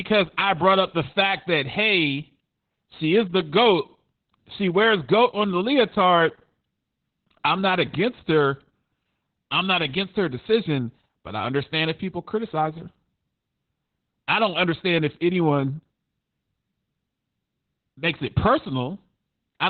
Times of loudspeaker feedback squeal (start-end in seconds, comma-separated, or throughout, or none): none